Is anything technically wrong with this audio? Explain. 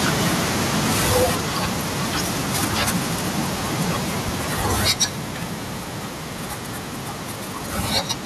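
Yes. There are two problems, and they are linked.

Microphone overload occurs three times: from 0.04 to 1.3 s, from 4.28 to 4.30 s, and from 4.6 to 5.05 s. The peaks run past the converter's ceiling by about 7 dB, 3 dB and 8 dB. The likely cause is input volume set too high. The waveform tops get sliced flat. A few percent of samples clip in the longer stretches. In the brief burst it is around 15 percent. The loud syllables sound harsh and crackly.

A microphone volume step-down happens at 1.23 s and again at 4.91 s. Each time, the level drops by about 4 dB in a single jump. Both steps land inside a clipped passage. This is likely the call software reacting to the overload by cutting the device's input gain. The voice and the background fall together, suddenly. It is heard as an abrupt loss of loudness, not a smooth fade.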